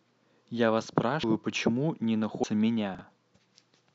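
Compressed frames skipped at 1.23 s and again at 2.43 s: in this speech clip the audio jumps forward twice, losing roughly 150 ms and then roughly 200 ms, gaps that fit about seven and ten whole 26.1 ms codec frames missing or rejected by the decoder. Because adjacent frames overlap, each jump lands as a short smeared blip, not a sharp click. Chunks out of order from 2.95 to 3.01 s: a 20 ms block of audio plays two chunks later than it should, after the material that ought to follow it. Nothing is lost, but the sequence is scrambled, producing a brief jumbled moment with three hard joins.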